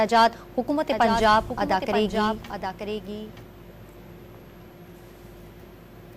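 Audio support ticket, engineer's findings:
Doubled audio track, 0.93 to 3.43 s. Second full-band copy trails the original by about a second, roughly 5 dB down, with no decay or room colour; it cuts in and out abruptly at both ends. Likely cause: same feed captured twice via a slower parallel path, or an edit leaving two out-of-step copies overlapping in the mix.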